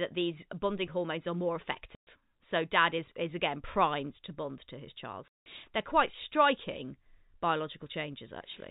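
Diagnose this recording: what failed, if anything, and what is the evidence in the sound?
Network packet loss filled with silence: dropped packets were replaced with nothing, leaving hard-edged gaps at 1.95 s (120 ms, after "bonding hormones are more") and 5.28 s (180 ms, after "bond to his child").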